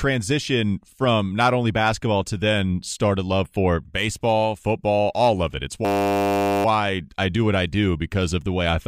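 A system hang loop runs from 5.85 to 6.65 s, just before "I do what I". The driver stalled while the hardware replayed one 10 ms buffer about 80 times, giving a steady 100 Hz buzz in place of the speech. Afterwards the audio resumes with essentially nothing missing.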